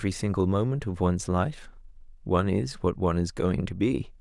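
No technical faults detected.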